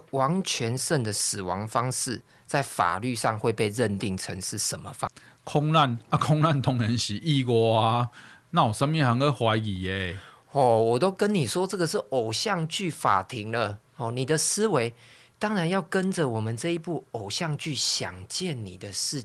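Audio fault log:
5.07 to 5.20 s, skip ahead: roughly 0.4 s of speech is simply gone, and playback jumps straight across the hole with no fill. Audio was dropped while later audio waited, so the two sides of the cut butt together almost directly, shortening the delay by about that much.
5.68 to 6.04 s, jitter buffer speed-up: the speech runs about 9% fast at unchanged pitch, sounding briefly rushed. With too much audio queued, the receiver trimmed short pitch-period pieces again and again, removing roughly 40 ms in total to bring latency back down.
10.59 s and 13.06 s, hard clipping: for about 0.1 s each, peaks exceed what a stage can pass, overdriven by about 1 dB and then about 2 dB, so they are sliced flat. The flattened tops add high harmonics, heard as a short crackly roughness on the loudest moments, slightly harsher at 13.06 s.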